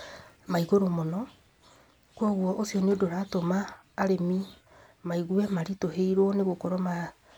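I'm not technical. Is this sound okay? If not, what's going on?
Yes, it sounds fine.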